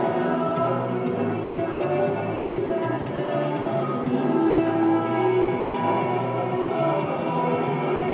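From 1.44 to 1.8 s the sound gets chopped by the voice detector, most likely because the sender's detector kept flipping between sending and muting, so about 220 ms of real signal is swapped for comfort noise. It happens again, more stubbornly, from 2.36 to 4.58 s with roughly 480 ms lost in pieces, then from 5.42 to 5.74 s (about 200 ms) and right at the end, 7.96 to 8.12 s (about 80 ms).

At 6.62 s there's a short one of a different kind: sound dropped by the voice detector. For 60 ms the sender likely treated the sound as background and stopped transmitting. The receiver covered the gap with steady comfort noise, so the sound briefly gives way to that hiss before picking straight back up. All of this sits on a narrowband call path with nothing above 4 kHz, which fits a 64 kbps G.711 A-law path.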